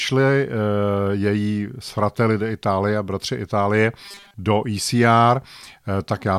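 Between 4.04 and 4.34 s, new audio likely arrived too seldom, so playback looped a tiny stretch, fitting a 5 ms buffer, and skipped most of the real signal. This robotic sound from repeated short buffers flattens the speech into a rigid, metallic 200 Hz buzz.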